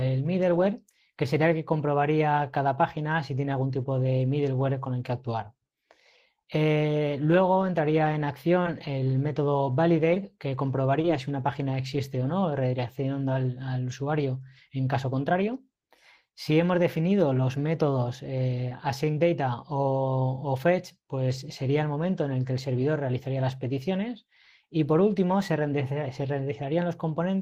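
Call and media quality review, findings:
Short concealed packet loss at 8.63–8.67, 10.15–10.18, 11.02–11.06 and 18.70–18.73 s. Each is a brief smear or wobble where 20 ms of audio was missing. Decoder loss concealment extended the preceding sound, then blended back in. There is no silent gap or hard click, unlike an unconcealed dropout.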